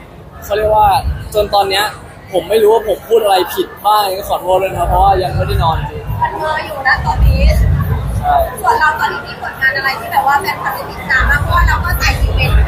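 No technical faults can be heard anywhere in the audio.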